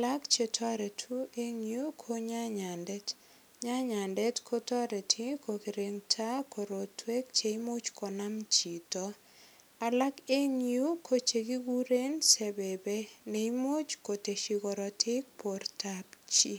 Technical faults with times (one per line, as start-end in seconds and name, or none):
none